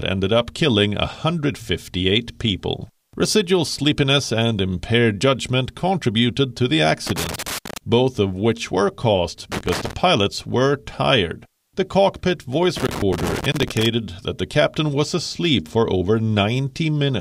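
Loose connector crackle breaks in three times: 7.07 to 7.78 s after "judgment contributed to the", 9.52 to 9.93 s after "of which were caused", and 12.76 to 13.86 s before "that the captain was". A worn contact chops the signal irregularly, giving scratchy bursts, unlike the clean clicks of digital dropouts.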